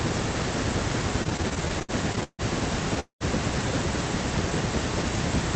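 From 1.23 to 2.41 s the speech runs into repeated stalls (stutter): sixteen short gaps, the longest 153 ms, together about 372 ms, roughly a third of that stretch. Packets kept arriving late, so the jitter buffer emptied again and again and the receiver stretched the last sound each time. Nothing drops out; the speech drags and stammers. Unlike a single freeze, the interruptions are many, brief and clustered, giving a halting rhythm rather than one pause.

At 3.00 s a single call audio freeze holds the sound until 3.23 s, about 209 ms in all. The last sound is carried on briefly, then fades into roughly 120 ms of silence before speech resumes exactly where it stopped. The likely cause is a burst of delayed packets that drained the jitter buffer once, adding a 209 ms delay. What separates it from the stutter is one longer hold with a silent tail, not a string of tiny repeats.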